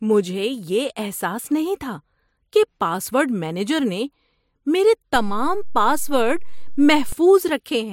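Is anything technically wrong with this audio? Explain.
Yes. A DC step occurs at 5.16 s: the waveform's zero line jumps to a new offset, as happens when a converter recalibrates or an input carrying an offset is switched in. The offset lasts until 7.12 s. Each transition sounds like a brief low thump under the speech, which itself continues unchanged. On a waveform the whole trace visibly shifts off centre between those times; a spectrogram shows a short broadband, low-weighted smear at each edge.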